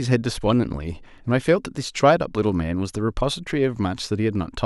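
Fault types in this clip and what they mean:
No faults can be heard.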